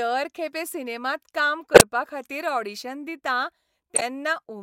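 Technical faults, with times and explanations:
1.74–1.81 s and 3.95–4.02 s, corrupt frame decoded: bit errors in a couple of compressed frames each time were decoded anyway. Misread gains and codes misplace energy in frequency, giving a blip after "खेपे सिनेमांत काम", the louder of the two, and one about 5 dB quieter after "ऑडिशन दितां".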